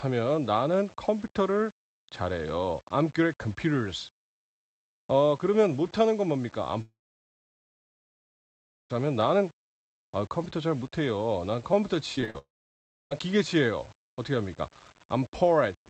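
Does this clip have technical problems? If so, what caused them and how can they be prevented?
Yes. The speech sounds grainy and gritty throughout, with quiet stretches breaking up. This is likely low bit depth without dither: rounding to about 7 bits leaves distortion around 30 dB below the signal. Keep the audio at 16 bits or more, and apply dither whenever reducing bit depth.

From 6.81 to 8.94 s, the sound briefly smears into a fading buzz and then goes silent, resuming at "하면 나는" with that stretch lost. A second gap runs from 12.38 to 13.12 s and ends at "기계 치예요 어떻게 합니까". Both are likely a long network dropout, where no audio arrived and the receiver's concealment faded out. A more stable connection, such as wired instead of congested Wi-Fi, prevents these.

Just after "잘 못해요 난 컴퓨터", from 12.16 to 12.35 s, the speech turns choppy and robotic. This is repeated packet loss (robotic sound): about half the span is patched guesses filling several holes of up to 42 ms each. 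Reducing network congestion or enabling forward error correction prevents it.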